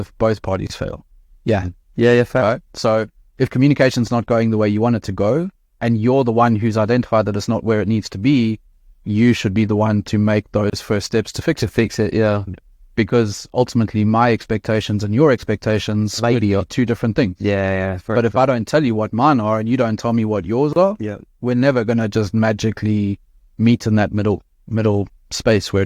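The speech was encoded in separate pieces, about 10 s long, and joined without trimming each encoder's start-up delay and last-frame padding, so a gap at a join of encoded pieces opens roughly every 10 s. The first, about 28 ms, falls at 0.67 s. The next, about 31 ms, comes at 10.70 s between "the one to make" and "first steps to fix". Another, also 31 ms, lands at 20.73 s between "tell me what yours" and "are yeah we're never". Each is a brief dropout with smeared edges before the speech resumes where it stopped.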